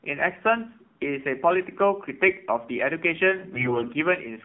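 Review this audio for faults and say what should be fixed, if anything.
The speech runs through an AMR narrowband mobile codec for the whole clip, and the damage is plainly audible. Everything above 4 kHz is gone. The line band sits at 200 Hz to 3.4 kHz, so voices sound thin and boxy. The voice model is driven by very few pulses per frame, which makes the speech buzzy and synthetic and fits the 7.4 kbps mode. A plain low-pass filter would dull the top end without adding this buzz. Prevention: send the audio over a wideband path such as AMR-WB or a VoIP codec.

From 3.54 to 3.92 s, AMR bit errors make the voice turn hoarse, scratchy and gargly while its pitch and loudness stay roughly in place. On a weak link, the less protected bits of each frame arrived flipped, around one in seven of them. The checksum on the important bits still passed, so the frames were decoded instead of being discarded. 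The misplaced excitation pulses and wrong fine parameters covered a stretch that fits about eighteen 20 ms frames. Dropped-frame concealment sounds different: it would give a smeared repeat or a fade, not this rough grit. Prevention: improve signal strength, or use stronger channel coding so that corrupted frames are caught and rejected.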